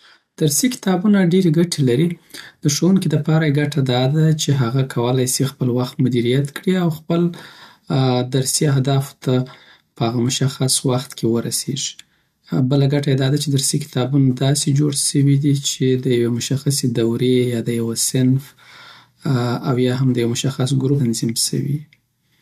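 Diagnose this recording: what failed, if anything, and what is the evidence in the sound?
Damaged data in the compressed stream, a codec-stage fault: corrupt frames at 21.0 s are misread, producing a brief blip seen as a thin vertical spectrogram streak.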